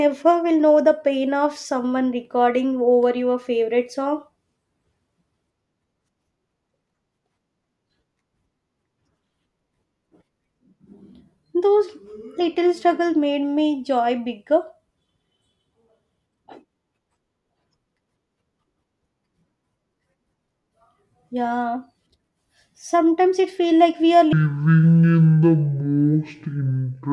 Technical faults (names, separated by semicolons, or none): wrong sample rate